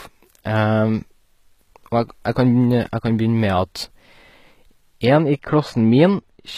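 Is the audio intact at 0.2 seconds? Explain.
No. At 0.2 s, as throughout the speech, the s sounds come out gritty and lispy, the treble sounds synthetic, and nothing is left above 14.9 kHz. The likely cause is HE-AAC compression, which rebuilds the upper band by copying lower bands upward, consistent with a very low bitrate near 20 kbps.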